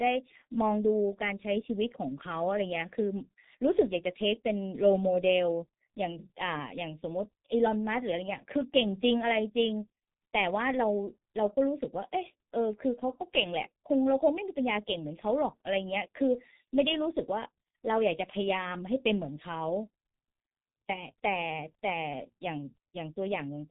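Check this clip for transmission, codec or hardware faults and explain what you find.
There's one fault, and it runs through the whole speech clip.

G.723.1 codec, start to finish: long 30 ms frames and a slowly updating voice model smear consonants. Nothing passes above 3.8 kHz, so it sounds muffled and hoarse, consistent with about 6 kbit/s.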